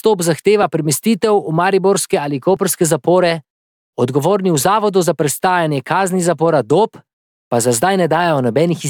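A speech clip with one repeated buffer at 2.57 s. A tiny slice of audio, about 1.33 ms long, plays twice in a row. The join is hard, so it sounds like a brief click rather than a stutter. New audio arrived late, and the device replayed its last block, which fits a 64-sample buffer. Almost no audio is lost.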